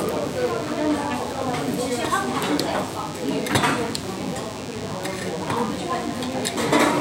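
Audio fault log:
throughout, DECT cordless phone buzz: a nearby DECT handset or base station is pulsing radio energy every 10 ms, and the audio circuitry is rectifying those bursts, so a steady, thin 100 Hz buzz rich in harmonics sits under the sound, roughly 15 dB below it.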